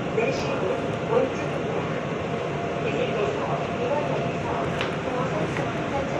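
At 0.37 to 0.42 s, the sound briefly jumbles. This is chunks out of order: a 23.22 ms chunk arrived one chunk late and played after its successor. Nothing is missing. The swapped order leaves three hard joins.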